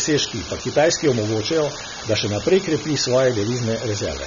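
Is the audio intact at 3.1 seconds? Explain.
No. At 3.1 seconds the speech carries a steady crackle from an unreliable data bit, which runs through the whole clip. One marginal bit flips at random, so the waveform shows scattered identical-height spikes, even in pauses.

The sound is also dull and warbly, with nothing above 6.9 kHz. This is likely AAC compression at a low bitrate near 24 kbps. On a spectrogram it shows as a hard ceiling.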